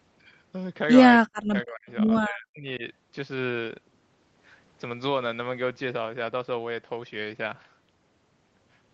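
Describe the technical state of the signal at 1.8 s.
At 1.8 s the speech is caught in a dip from 1.2 to 1.88 s, likely speech suppressed in double talk, with the echo canceller cutting it by about 40 dB, seen as a collapsed waveform and faded spectrogram energy.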